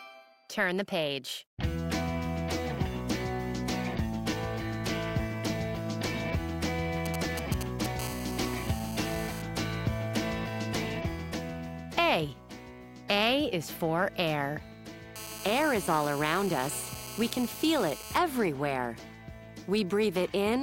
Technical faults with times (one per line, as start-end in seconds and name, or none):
7.06-8.01 GSM signalling bursts
8.02-9.42 GSM phone buzz
15.16-18.18 GSM phone buzz